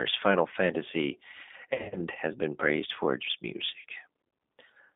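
The speech runs through the G.729 codec for the whole clip. Its sound fits the 8 kbit/s G.729A variant. The band sits between 200 Hz and 3.6 kHz, so there is no low end and no air at the top. The codec rebuilds each short frame from a coarse filter, a pitch guess and a few pulses. That leaves the speech plainly rough and slightly synthetic throughout.

VoIP packet loss, concealed by the speech codec, first appears from 1.70 to 1.97 s. The gaps point to about 160 ms of lost audio spread over roughly 220 ms, with the longest run near 70 ms. The decoder fills each gap by repeating its last pitch and filter at falling gain. The sound smears into a buzzy tone or coloured noise that fades. It stays weak for a moment after the stream resumes, because each frame builds on the last. A second, shorter dropout runs from 3.80 to 3.85 s. It hides about 50 ms and gives a brief fading blur.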